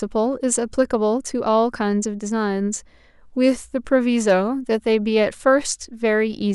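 Hard clipping occurs at about 4.29 s, a brief overload of roughly 2 dB where the speech peaks exceed what a stage in the chain can pass and are sliced flat. The squared-off tops add high harmonics, heard as a short crackle on that peak.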